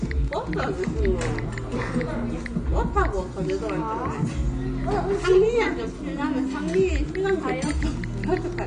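From start to finish there's plainly audible AAC compression damage. Nothing sounds above 9.6 kHz, and the sound is dull and smeared, likely from AAC-LC at around 32 kbps.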